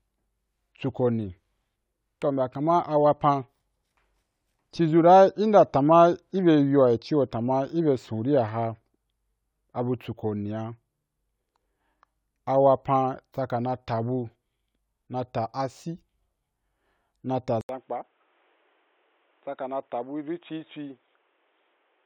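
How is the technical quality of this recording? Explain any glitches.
The recording is clean until 17.6 s, when the sound suddenly turns boxy and dull through to the end. Nothing above 3.8 kHz survives, and an 80 ms silence marks the change. The likely cause is an input switched to a poorer device: the system jumped to a narrower-band device with its own tone. It differs from a simple filter or codec bandwidth drop because the level falls by a few decibels and a new, faint background noise appears with the change.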